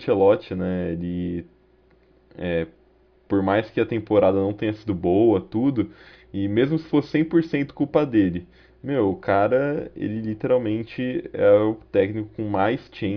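Nothing technically wrong turns up in this speech recording; there's no fault to point to at any moment.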